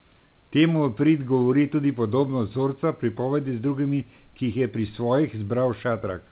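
Nothing goes wrong anywhere in this speech clip: it comes over a G.711 mu-law call path at 64 kbps with nothing above 4 kHz, and the room noise sits about 41 dB below the speech.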